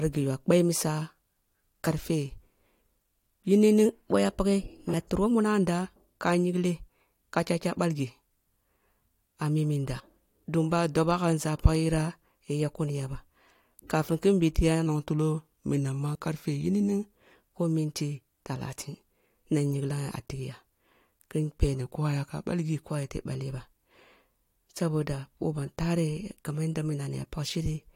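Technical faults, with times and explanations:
3.86–5.31 s, drift correction step: the speech runs about 6.1% fast and rises about a semitone (102 cents), then snaps back to normal speed and pitch. This is likely a clock-matching resampler nudging its rate in one step to drain a buffer. Speed and pitch move together because the same samples are played out faster.
9.99 s, compressed frames skipped: the sound jumps ahead by roughly 50 ms. Compressed frames that were lost or rejected as damaged are missing at this point.
14.86–17.17 s, drift correction step: the speech slows by about 6.1% and drops about 109 cents, just over a semitone, then returns to normal ahead of "who minti takrin na". This is likely the same rate-matching software, this time refilling its buffer.
16.14 s, compressed frames skipped: inside that slowed stretch, the sound jumps forward by roughly 20 ms where compressed frames are missing.
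21.80–22.88 s, drift correction step: the speech again runs about 6.1% slow and about 109 cents flat, then snaps back just before "ayete baleh ba". This is likely another single-step rate change by the rate-matching software.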